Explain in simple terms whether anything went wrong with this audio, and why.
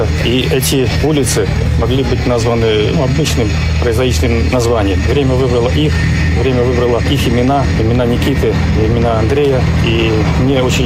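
Nothing went wrong; no technical faults can be heard.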